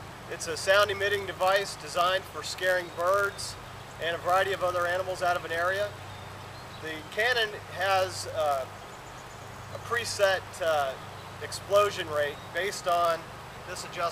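From start to finish a steady buzz at about 91.5 Hz rides on the sound, and everything runs marginally slow, at 0.996 of normal speed. This is a padded block size mismatch: each block arrives slightly short and is zero-filled, inserting a tiny gap 91.5 times a second.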